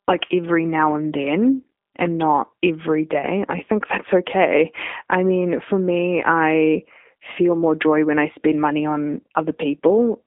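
This speech clip carries G.729 codec damage for its whole length. The sound is confined to a telephone band of roughly 250 Hz to 3.6 kHz, with nothing above 3.7 kHz, and the coding artefacts are plainly audible as a rough, synthetic texture. That fits G.729A at 8 kbit/s, which rebuilds each short frame from a vocal-tract filter, a pitch predictor and a few excitation pulses.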